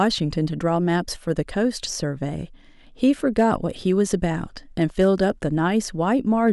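Hard clipping hits the speech peaks at 0.02–0.07 s, 3.04–3.54 s, 4.14 s, 4.82–5.30 s and 6.46–6.50 s, with peaks pushed about 1 to 3 dB past the ceiling and sliced flat. You hear it as crackly grit, roughest at 3.04 s.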